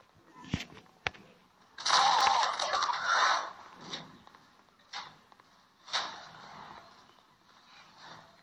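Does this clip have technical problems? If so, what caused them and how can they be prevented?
Yes. At 2.21 s there is a short blip. This is damaged data in a compressed stream. A stretch of the encoded file was corrupted. The decoder could not read the frames there, lost its place, and skipped forward to the next valid frame header. The garbled output and the lost sync make the blip. It can be prevented by transferring and storing the file with checksums or error correction, and by re-fetching any corrupted segments.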